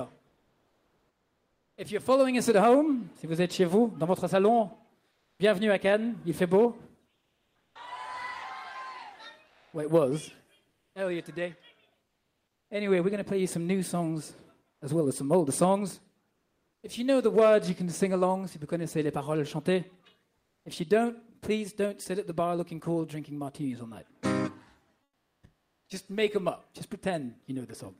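Comfort noise in place of the background at 0.27–1.75, 5.11–5.39, 7.15–7.75, 9.47–10.95, 16.35–16.83, 20.39–20.63 and 25.03–25.83 s. The sender likely stopped transmitting in these pauses under Opus DTX, so the receiver filled each gap with synthetic noise. The real background gives way to a smoother, featureless noise. That noise is about 3 to 4 dB quieter at 0.27, 20.39 and 25.03 s, about the same level at 5.11 s, about 8 dB quieter at 7.15 s, and about 2 dB louder at 16.35 s.

Onset clipped by the voice detector at 7.70–7.75 s, at the end of the third comfort-noise gap. The detector likely reacted late, so the first 50 ms of the returning sound were never sent and were filled with comfort noise. The sound jumps in abruptly, its soft beginning gone.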